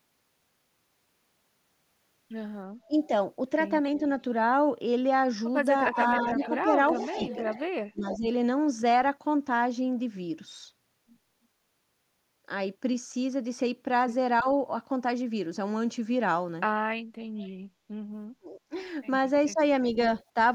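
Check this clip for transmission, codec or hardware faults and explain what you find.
Two kinds of fault turn up in this speech clip, both tied to an echo canceller working against a loudspeaker on one side of the call.

Speech suppressed in double talk: the voice dips and partly cuts out at 2.88–3.11 s, 5.92–8.28 s, 14.41–14.46 s, 18.28–18.75 s and 19.52–20.36 s. Most dips fall about 10 to 15 dB, the one near 14.4 s only about 5 dB, and the one at 18.28 s goes about 35 dB deep, nearly silencing the voice. The long stretch near 6–8 s loses only a fraction of its length to gaps. The likely cause is that both sides spoke at once and the canceller, unable to separate the talker from the returning echo, turned everything down.

Echo leak: a faint, delayed repeat of the voice trails the speech at 6.0–8.18 s, lagging by 0.35 s and sitting about 15 dB below it. A much quieter scrap, about 25 dB down, returns at 17.37–17.49 s with almost the same 0.34 s delay. 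The consistent lag likely comes from the far end's microphone picking up its own loudspeaker, with the canceller failing to remove all of it before sending it back.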